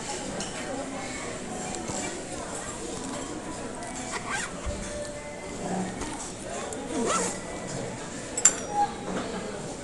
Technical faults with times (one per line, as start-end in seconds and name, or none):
0.00-9.83 Dolby Digital compression